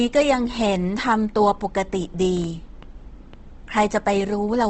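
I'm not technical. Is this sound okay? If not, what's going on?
No, not quite. Throughout, the speech sounds grainy and rough, and nothing above about 8.3 kHz survives, so it lacks crispness. That's likely Opus compression squeezing the audio hard, filling gaps with noise-like texture instead of clean detail.

From 2.37 to 4.3 s there's a train of clicks: roughly seven ticks or pops at an uneven pace, nearly four a second, about as loud as the speech. Likely cause: electrical interference or a faulty connection or power supply.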